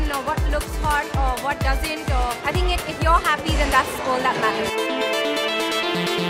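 No technical faults can be heard anywhere here.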